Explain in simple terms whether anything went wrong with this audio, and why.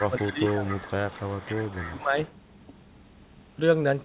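Two things go wrong, both in the first 2.3 seconds or so. First, speech suppressed in double talk: from 0 to 0.72 s and again from 1.8 to 2.16 s the speech dips noticeably. Both sides were probably talking at once, and the echo canceller likely treated the talker's voice as echo and turned it down along with it.

Second, an echo leak: from 0 to 2.05 s you can hear a quieter copy of the speech trailing about a quarter second behind, and a very faint scrap returns around 2.24 to 2.32 s. The likely cause is a loudspeaker on the far end whose echo canceller didn't fully scrub what its microphone picked up, so some of it was sent back. The call path itself carries the usual phone-line sound, with nothing above about 4 kHz.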